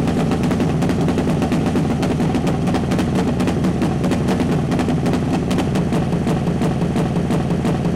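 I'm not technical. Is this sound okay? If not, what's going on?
No. From 6.12 s to the end, the sound gets stuck in a broken-record loop. A short piece, about 0.34 s long, plays five times in a row. The playback likely stalled and kept resending that piece. Whatever should have followed is missing.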